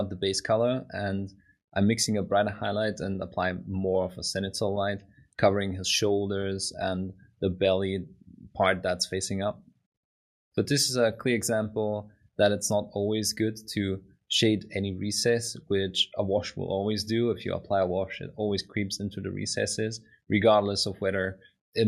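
No technical faults can be heard anywhere in this recording.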